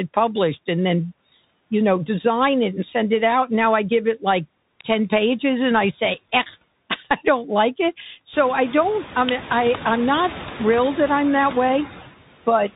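Across the whole speech clip, noise suppressor artifacts pull the background down by about 16 dB between phrases and let it swell back under them. That pumping follows the speech frame by frame, unlike the room noise itself, which simply steps up by about 15 dB from around 8.5 s.

Underneath that, a Bluetooth CVSD headset codec is plainly audible. Nothing passes above 4 kHz, and a granular hiss sits beneath the speech. Sibilants turn scratchy and loud bright sounds distort because the one-bit up-or-down steps cannot keep pace, which fits a 64 kbps CVSD link. A plain low-pass filter would dull the sound without adding that grit.

At 4.81 s, just after "I give it like", a sharp snap lands on top of the audio. The same thing happens at 9.29 s, between "I don't I" and "I I'm not thrilled". Each is most likely an electrical switching spike from nearby equipment. The audio underneath carries on uninterrupted, which separates these snaps from a dropout or codec glitch.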